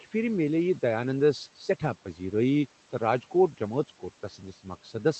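The noise suppressor mistook part of the speech for noise between 2.05 and 2.33 s, turning roughly a tenth of a second down by up to about 9 dB, so those sounds come out swallowed and faint.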